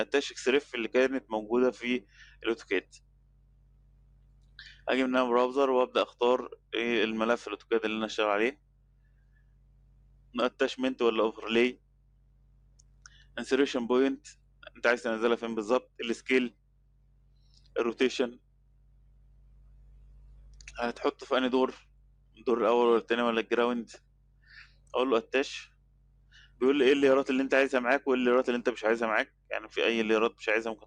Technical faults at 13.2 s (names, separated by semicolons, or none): noise suppressor applied to music or sounds; sound cut by the noise suppressor